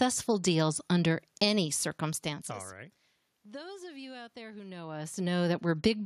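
No technical faults occur in this speech; the background room noise and the level changes around 2 and 4.5 seconds, where the talker shifts relative to the microphone, belong to the recording itself.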